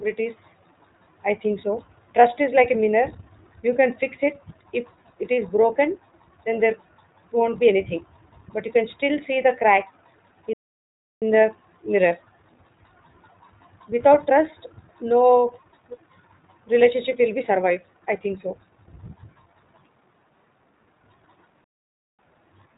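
Speech, coded throughout with the iLBC codec. Nothing above 4 kHz survives, so the sound is dull and narrowband. The coding damage is plainly audible as a rough, synthetic edge. Each 20 ms frame is coded on its own, which fits iLBC's 15.2 kbps mode. There are two playback stalls, from 10.53 to 11.22 s and from 21.64 to 22.19 s. The speech cuts to silence mid-flow for about 0.68 s and then 0.54 s. The player likely ran out of data or was blocked.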